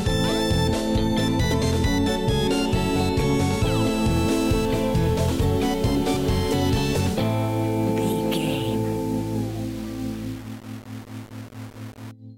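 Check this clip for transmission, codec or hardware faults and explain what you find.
One fault is present. Low bit depth without dither runs from 4.11 s to 12.11 s. The graininess, sitting roughly 25 dB below the signal, fits 5-bit quantisation, likely rounded with no dither. The error follows the waveform, so quieter stretches turn gritty.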